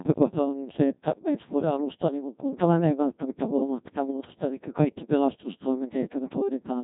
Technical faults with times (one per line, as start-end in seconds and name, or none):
0.00-6.83 Codec 2 vocoder